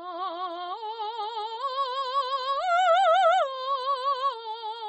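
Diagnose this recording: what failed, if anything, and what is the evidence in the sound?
Throughout the music the treble stops dead near 8.3 kHz and the texture sounds watery and swirly, likely MP3 compression at the codec stage, consistent with a bitrate around 32 kbps.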